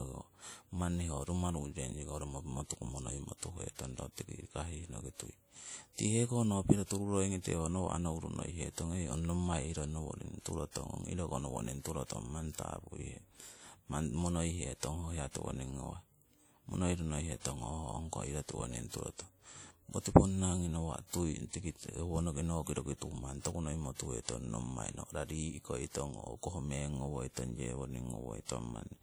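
Speech with plainly audible ringing, washy smearing and a hiss that breathes with the voice throughout, likely from WMA compression; the sound fits a bitrate near 48 kbps.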